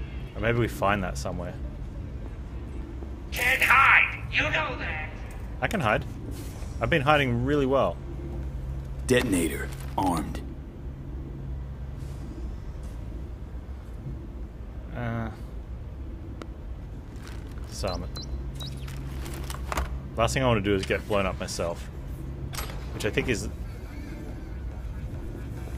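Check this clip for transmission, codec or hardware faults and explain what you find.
One hardware fault is present. A loud pop occurs at 16.42 to 16.44 s: a single sharp pulse about 10 dB above the sound, likely from a sudden voltage step such as a switch or static discharge, with the audio continuing underneath.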